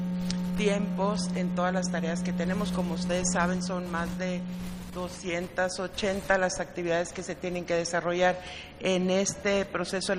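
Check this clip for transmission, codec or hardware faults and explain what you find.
Nothing faulty can be heard anywhere in this audio.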